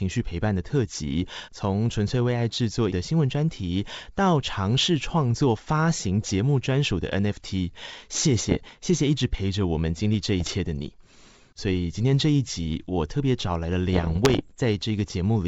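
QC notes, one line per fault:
8.48–8.57 s, 10.38–10.54 s, 13.93–14.58 s: bit errors on an ADPCM link. Flipped bits in the G.722 stream derail the decoder's step size and predictor, so each hit rings on as pops and rough bursts with brief level jumps, unlike the clean gaps of packet loss. The longest run is the last.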